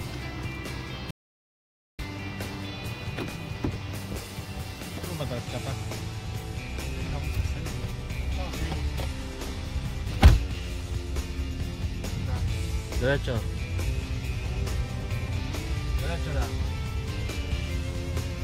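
At 1.11 s the sound cuts off abruptly into silence, with no room tone underneath, and resumes mid-flow at 1.99 s, about 0.88 s later. This is an audio dropout to silence, likely from a momentary loss of input while recording continued writing silence.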